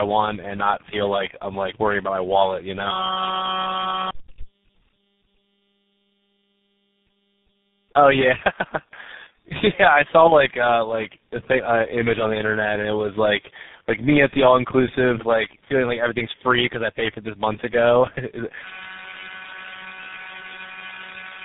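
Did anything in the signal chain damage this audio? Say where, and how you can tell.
Yes. Tandem speech coding runs through the whole clip, in the codec stage of the call path. The speech is rough, muffled and warbly, with nothing above 3.8 kHz. The damage points to three low-rate speech coders in series, each re-encoding the previous one's degraded output, so the artefacts compound.

A system hang loop occurs from 2.91 to 4.11 s and again from 18.64 s to the end at 21.44 s, at the driver or buffer stage. Each span is a steady buzz at 188 Hz, one 5.33 ms fragment repeating, which fits a 256-sample ring buffer cycling while the system froze. About one second and three seconds of audio are lost.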